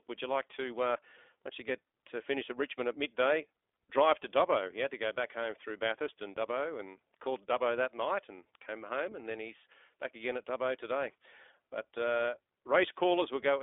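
Across the whole recording the speech has been carried through the iLBC codec, which codes each short frame's excitation on its own; the frame rhythm fits its 20 ms mode at 15.2 kbps. The line band runs only from about 300 Hz to 3.6 kHz, so the sound is thin and boxy with no low body or high air. The codec damage is plainly audible, leaving the speech rough, buzzy and somewhat synthetic from start to finish.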